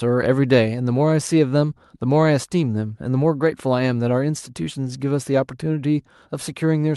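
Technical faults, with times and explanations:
No technical faults can be heard anywhere in this speech recording. Nothing in it calls for a time or an explanation.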